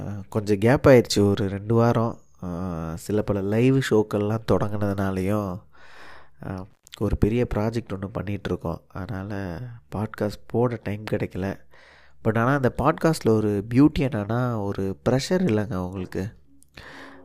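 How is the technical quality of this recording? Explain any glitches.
There is one glitch in the speech. At 6.71 s the sound drops out abruptly, with a crackle at each edge and faint hiss in the gap, returning by 6.88 s. This is an intermittent contact: a loose cable or plug briefly opened the signal path for about 114 ms before reconnecting.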